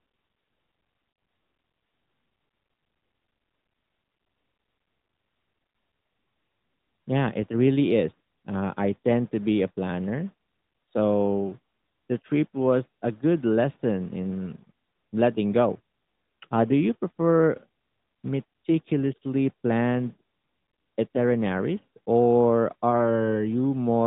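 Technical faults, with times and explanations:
1.12 to 1.16 s and 22.90 to 23.18 s: lost AMR speech frames. Corrupted radio frames were discarded, so the decoder repeated the last good pitch and vocal tract shape at falling gain. The first gap is about two frames long. The second is about one frame. The second sounds like a brief dip or warble in the narrowband audio, with nothing above 4 kHz.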